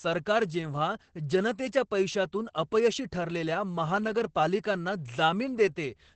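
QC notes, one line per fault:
Throughout: Opus voice compression. The speech has been squeezed through a low-rate voice coder, and nothing remains above about 8.5 kHz, giving a muffled, hoarse and faintly robotic quality that is plainly audible. The sound points to the SILK linear-prediction path at wideband, roughly 12 kbps, where coarse coding of the excitation roughens the voice. Unlike a plain low-pass filter, which only dulls the top, this adds grainy, synthetic texture within the band.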